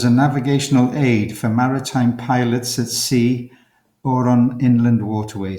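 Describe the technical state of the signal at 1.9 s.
At 1.9 s the speech signal is intact, with no audible fault at that moment.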